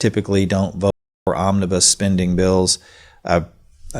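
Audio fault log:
0.28–3.93 s, clock slip clicks: faint, evenly spaced ticks recur roughly every 0.2 s, about fifteen in all, heard on the speech and not in the silent gap. The likely cause is two unsynchronised clocks around 100 ppm apart, each tick fitting a single sample dropped or repeated.
0.90–1.27 s, audio dropout to silence: the speech cuts out abruptly for 366 ms into silence, with no room tone underneath, then resumes mid-flow. The likely cause is a lost input, with the recorder writing silence until the signal returned.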